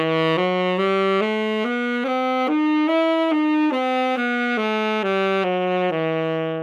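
Everyday sounds, with no technical faults audible anywhere.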